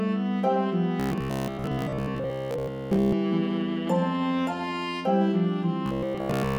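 Robotic sound from repeated short buffers appears from 1.00 to 3.12 s and again from 5.86 s to the end. The sound turns into a rigid, metallic buzz at 66.8 Hz. That pitch points to a repeat of about 15 ms. The likely cause is audio arriving too seldom, so the software loops the last short buffer to fill the gap. Roughly 70% of the time is repeated material, and the missing audio is skipped.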